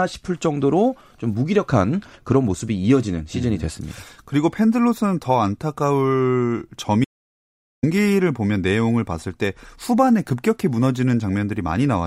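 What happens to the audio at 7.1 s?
The speech cuts to silence from 7.04 to 7.83 s, an audio dropout to silence, likely from lost input while recording continued writing silence.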